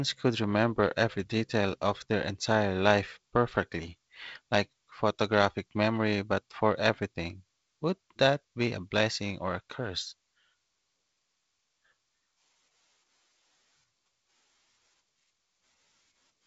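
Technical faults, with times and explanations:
No faults are audible in this speech recording.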